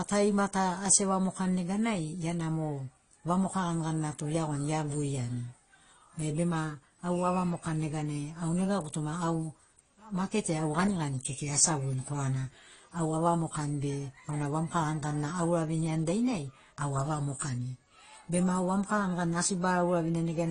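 A speech recording with transcoding between lossy codecs across its whole length: nothing is present above 10.2 kHz, and the artefacts of one low-bitrate codec are heard together with those of a second. This is likely a file first encoded with Opus and then re-encoded to AAC-LC, both at bitrates around 32 kbit/s, so the second encoder spent its bits reproducing the first one's damage while adding its own.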